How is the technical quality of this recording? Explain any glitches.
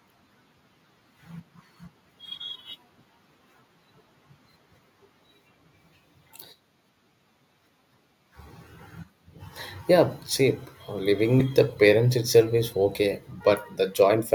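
Two brief dropouts interrupt the speech. At 11.39 s and 13.40 s, compressed frames are skipped and the audio jumps ahead by about 70 ms and 40 ms. Those jumps fit a 21.3 ms frame length, so roughly three frames and then two are missing.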